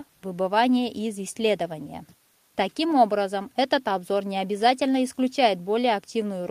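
No technical faults are audible.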